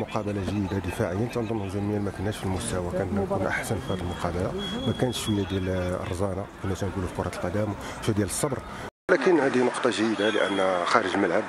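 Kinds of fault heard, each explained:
Input switched to a poorer device: At 8.89 s the audio drops out for about 200 ms, then continues through what is likely a different, lower-grade input device for the remaining seconds. The replacement path passes nothing above 10.9 kHz, so the top end disappears and the sound turns duller. The level also shifts by a few decibels, and a new background noise floor appears, sitting well below the signal.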